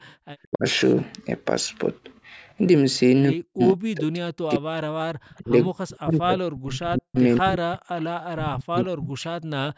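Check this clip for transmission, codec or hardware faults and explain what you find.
Two faults, both from a speakerphone call fighting itself: the talker keeps getting ducked, and faint echo leaks through twice.

Speech suppressed in double talk, at 0.43–0.64, 3.37–4.7, 5.38–7.17, 7.4–7.76 and 8.33–9.39 s: the voice drops hard, by something like 40 dB, and breaks up. The likely cause is the echo canceller clamping down while both ends spoke at once.

Echo leak, at 5.29–5.38 and 7.35–7.4 s: a faint copy arrives 175 ms late, well below the voice. It's likely the far-end echo canceller missed some loudspeaker pickup and sent it back.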